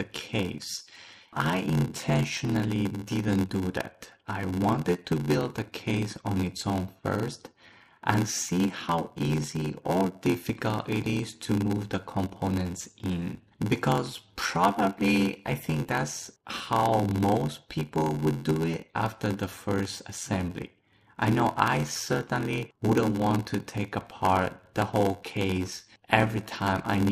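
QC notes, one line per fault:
Throughout: block size mismatch (padded). There's a steady buzz at 86.1 Hz and everything plays at 0.861x speed, though the pitch stays about where it should. One stage hands over blocks shorter than the next one reads, and the shortfall in each block gets filled with silence. That tiny gap recurring every block is the buzz, and the padding stretches the timeline. The numbers fit a 512-sample read block being fed roughly 440-sample writes.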